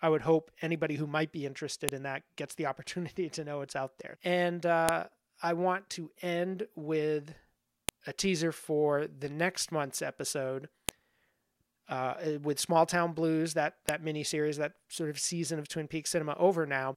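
Sharp clicks at 1.89, 4.89, 7.89, 10.89 and 13.89 s, every 3 s: file header played as audio, where header bytes from each joined piece play as samples.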